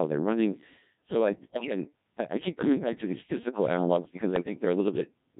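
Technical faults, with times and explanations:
Throughout: Codec 2 vocoder. The voice is rebuilt from pitch, energy and a spectral outline, so it sounds robotic and buzzy. Heavy damage fits a rate near 1.3 kbit/s.
1.34–1.72 s and 4.36–4.65 s: bit errors on digital voice radio. Flipped bits corrupt whole frames, causing pitch jumps, warbles and bleeps. The first burst, before "I I keep coming", is worse than the second, after "these physical analogs because", with an error rate near 10% against a few percent.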